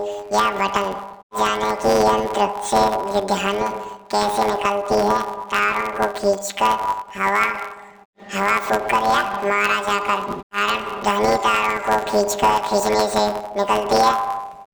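From the first moment to the last, the speech has a planar-read-as-interleaved fault. Each 10 ms chunk should carry all its left samples followed by all its right ones, but the playback side treats it as alternating pairs. So every chunk gets squeezed into two double-speed bursts, left then right. With chunks this short, you don't hear a clean octave jump; instead there's a robotic buzz riding on everything at about 100 Hz, the chunk rate.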